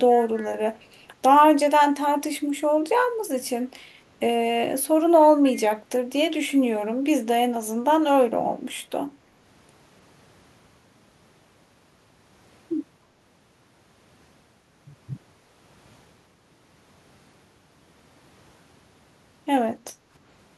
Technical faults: echo leak; background gated by the echo canceller

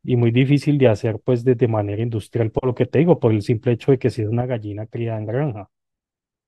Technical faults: sudden gain jump

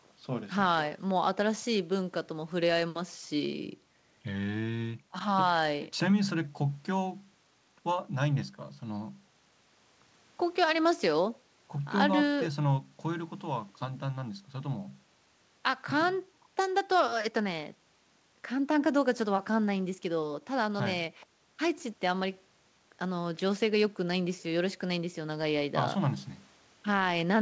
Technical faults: none

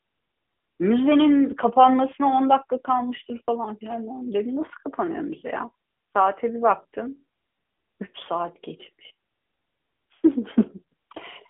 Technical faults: AMR narrowband mobile codec

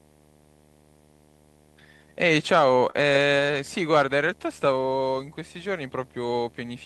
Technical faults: video or display buzz; repeated stalls (stutter)

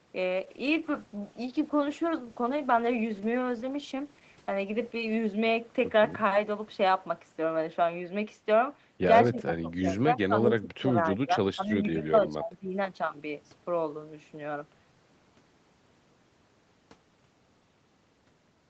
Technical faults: call bitrate drop; speech suppressed in double talk

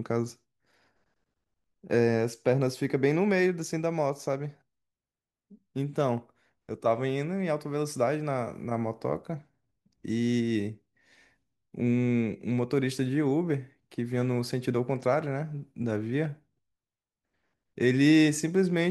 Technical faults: block size mismatch (truncated)

